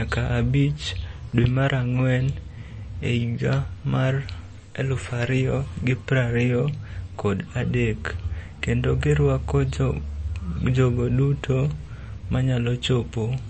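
Speech with MP3 compression damage throughout: nothing is present above 8.3 kHz, and the plainly audible watery, swirling texture points to a low bitrate near 34 kbps, likely from the encoder starving weak spectral lines so they flicker between frames and cutting the treble. A single loud pop, around 10 dB above the signal, sits between 1.44 and 1.47 s, after "abich dwe" and before "mar ang'wen". The speech continues underneath it, and the pulse is likely from a voltage step such as a plug, a switch, static or a driver glitch.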